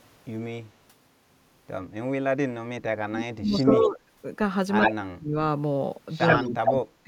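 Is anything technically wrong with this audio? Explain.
Yes, there are two related problems, both from echo cancellation on a speech call.

Speech suppressed in double talk shows up from 2.22 to 4.04 s, again from 4.91 to 5.35 s, and from 6.39 s to the end at 7.07 s. The talker's level sinks hard, by as much as about 35 dB (about 30 dB in the last stretch), for around two seconds in the first span and about half a second or less in the others. The likely cause is the echo canceller mistaking overlapping speech from both ends for echo and clamping down on everything.

Echo leak appears at 3.54 to 3.87 s, 4.80 to 4.93 s, and 6.17 to 6.72 s. You hear a second copy of the speech trailing the original by 73 ms, a little quieter in the first spot and a bit louder than the direct speech in the later two. This is likely a loudspeaker's output getting back into a microphone at the far end, with the canceller there not removing all of it before sending it back.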